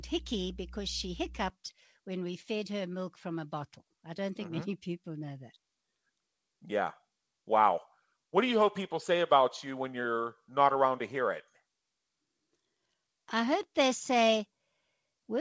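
A steady low 60 Hz drone with some low harmonics sits under the speech from 0.0 to 1.5 s, well below the speech, and gone by "when we fed her". This is mains hum, likely from a ground loop or nearby transformer leaking power-line current into the signal.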